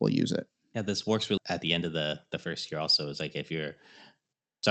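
At 1.37 to 1.39 s there is a skip ahead: about a second of speech was discarded while later audio already waited, so playback jumps straight across with no filler. The waveform shows an abrupt splice, and the spectrogram shows harmonics changing discontinuously at one vertical seam.

From 1.59 to 3.44 s a jitter buffer speed-up follows. The receiver, holding excess delay, repeatedly cut short pitch-period slices, around 150 ms in total, running speech at 107% with unchanged pitch. It sounds slightly hurried. Syllables look compressed in time, while harmonic spacing stays constant. Throughout, the Opus path limits content to 8 kHz, at a bitrate of about 32 kbps.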